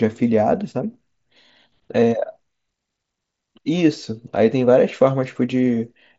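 No technical faults are audible.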